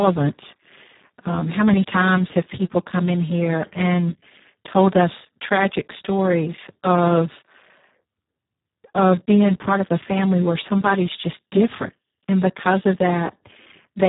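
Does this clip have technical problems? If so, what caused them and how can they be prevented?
Yes. Speex codec damage runs through the whole clip: the speech sounds hoarse, buzzy and close to robotic, which fits a very low bitrate near 4 kbps. A spectrogram shows nothing above 3.8 kHz and smeared, noisy harmonics below it. Prevent this by encoding at a higher Speex quality or using a modern wideband codec such as Opus.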